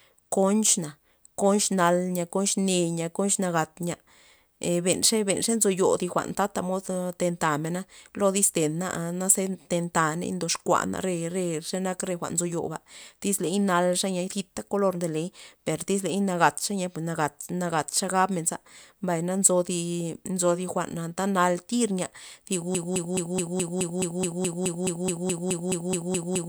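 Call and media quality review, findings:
Broken-record loop, 22.75 s to end of clip. Likely cause: player or stream stalled and kept re-sending its last buffered fragment. A 0.21 s slice of speech repeats exactly, back to back, 18 times, with no new audio. Everything that should have played after 22.75 s is missing.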